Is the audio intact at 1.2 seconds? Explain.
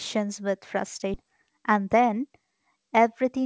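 No. Just before 1.2 seconds the audio jumps forward: at 1.14 to 1.16 s the sound leaps ahead with no gap and nothing filling the join, and roughly 400 ms of material simply never plays. This is a skip ahead. Later audio was already waiting, so the missing stretch was dropped, either in transit or by the jitter buffer discarding it, and the two sides of the cut were butted almost directly together.

Right after 1.2 seconds, from 1.23 to 2.60 s, the sound runs hurried at about 109% speed while its pitch stays the same. This is a jitter buffer speed-up. The buffer was holding more audio than its target, so the receiver repeatedly removed short pitch-period-sized slices to cut the delay, trimming roughly 150 ms in total. That compresses the timing without shifting pitch.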